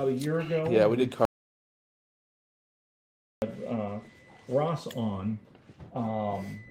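From start to finish the sender's clock runs roughly 4 percent faster than the receiver's, a case of clock drift between sender and receiver. Because samples arrive a little quicker than they are played, the jitter buffer keeps filling. The receiver has to shed the excess. The drift shows only indirectly, through the corrections it forces, as slight unevenness in pacing. On a waveform or spectrogram there is no single mark of it, only the small splices it leads to.

Those splices are repeated timing corrections running from 0.03 s to 6.67 s, with the material moving at about 103 percent of its natural speed. Each correction trims a short piece so the receiver keeps up. All of them go the same way, at irregular intervals. They come across as faint hiccups and a tempo that feels slightly hurried and unsteady. On a waveform they appear as tiny discontinuities where the shape jumps. A spectrogram shows thin vertical seams where the patterns shift abruptly.

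From 1.25 s to 3.42 s there is an audio dropout to silence lasting about 2.17 s. The sound cuts off mid-flow and returns just as abruptly. The gap is silent with no room tone, likely from the input being lost while recording continued. On the waveform it is a flat line. The spectrogram shows a completely blank column, with hard vertical edges on both sides.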